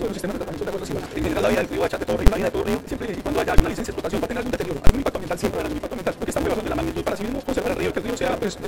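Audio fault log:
throughout: block size mismatch (truncated). A buzz at 188 Hz runs under the whole clip, and the sound plays about 1.88 times faster than normal while keeping roughly its normal pitch. The stage feeding the reader writes longer blocks than it takes in, so the tail of every block is discarded. The steady 188 Hz chop fits a 256-sample read, and the dropped material per block accounts for the 1.88 speed-up.
2.27 s, 3.59 s, 4.87–4.89 s: invalid numbers at full scale. Each event is a single loud bang. A calculation produced infinite or invalid values that were clamped to the largest positive or negative sample, so the output is pinned at one extreme value, far beyond the audio's peaks, for a moment. The first two are very brief, and the third lasts about 22 ms. The blocks involved fit sizes of about 1024 and 2048 samples. They are too short for separate start and end pops to be heard.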